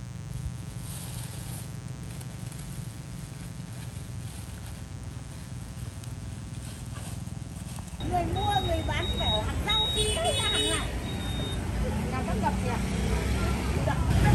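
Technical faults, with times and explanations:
Throughout: mains buzz, a raspy 60 Hz buzz roughly 20 dB below the sound, whose switching spikes spread harmonics into kilohertz, unlike smooth low hum.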